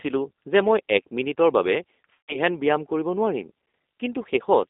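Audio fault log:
throughout: G.729 codec. Speech sounds rough and synthetic, with nothing below 250 Hz or above 3.7 kHz, which fits an 8 kbit/s pulse-coded voice codec. A spectrogram shows a hard band ceiling.
2.13–2.37 s: VoIP packet loss concealed by the speech codec. About 150 ms of audio is missing. The decoder extends the last pitch and filter into a fading buzzy tone or coloured noise. The spectrogram shows a smeared, frozen spectrum, and the waveform envelope decays, then recovers weakly.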